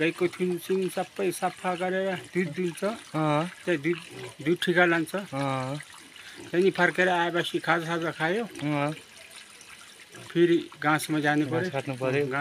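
No technical faults can be heard anywhere in the recording.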